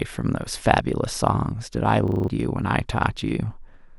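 From 2.08 to 2.28 s the speech breaks into a system hang loop: the computer or its audio driver stalls, and the sound hardware keeps replaying whatever sits in its ring buffer. The 40 ms segment points to a buffer of about that length. It repeats five times at 25 Hz, giving a short, rough, rattling buzz in place of the speech, and roughly a fifth of a second of real audio is lost before normal playback resumes.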